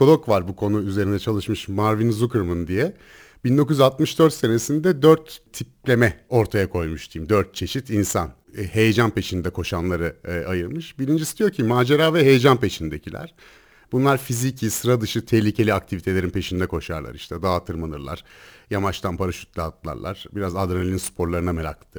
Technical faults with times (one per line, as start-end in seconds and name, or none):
0.00-21.98 sample clock jitter